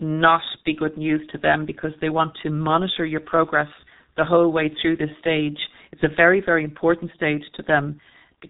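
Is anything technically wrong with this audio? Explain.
Yes. Throughout the speech there is heavy G.723.1 codec damage. The codec codes the signal in coarse frames and refreshes its vocal-tract model slowly, which fits a very low rate of about 6.3 kbit/s. Nothing is passed above 3.8 kHz, so the speech is muffled and hoarse and its consonants are smeared. On a spectrogram, energy stops at a hard ceiling near 3.8 kHz, and the formant bands look blocky and stepped in time rather than smooth.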